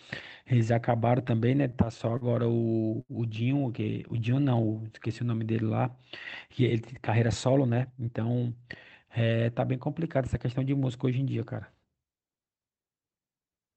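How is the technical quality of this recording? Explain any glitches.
The speech has several timing glitches from network delivery, all in the first nine seconds. The sound has passed through a call codec, and its top ends near 8 kHz, which fits a wideband Opus-style call link.

Repeated stalls (stutter) occur from 1.27 to 2.24 s and again from 4.17 to 4.60 s. Packets arrived late, so the jitter buffer kept running dry. The receiver extended the last sound to cover six gaps in the first stretch, the longest 44 ms, and four brief gaps of up to 14 ms in the second. The speech jerks and drags. A spectrogram shows short smeared or repeated columns, and the waveform has copied cycles, some with dipping amplitude.

A short stall from a late packet runs from 3.01 to 3.12 s. One packet missed its slot, and the receiver stretched the preceding sound for 80 ms until it arrived, then resumed without loss. 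A sound is held slightly too long, with a faint buzz. On a spectrogram this is a horizontal smear of frozen harmonics. The waveform shows repeated periods with a small dip.

A jitter buffer slow-down runs from 4.71 to 5.65 s. To build up a reserve, the receiver repeated single pitch periods, adding 76 ms, so this stretch plays at about 93% speed with unchanged pitch. Sounds are drawn out. The waveform shows extra identical cycles, and the spectrogram shows harmonics lengthened in time without moving in frequency.

A jitter buffer speed-up runs from 7.44 to 8.75 s. The buffer held more audio than it aims for, so the receiver trimmed pitch-period-sized pieces, roughly a fifth of a second in total, to reduce the delay. The speech runs at about 113% speed at normal pitch and sounds hurried. Spectrogram features look compressed in time, and the waveform has small seams where cycles were removed.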